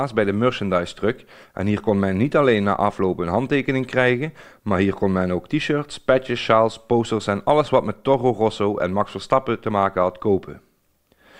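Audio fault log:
Nothing to log here; I didn't catch anything off anywhere in the clip.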